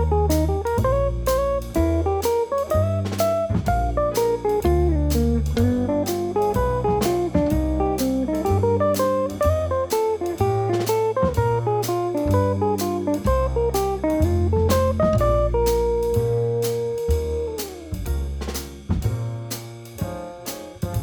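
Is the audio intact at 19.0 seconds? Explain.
Yes, the audio is intact at 19.0 seconds, with no dropout, click, distortion or other fault to be heard at that moment.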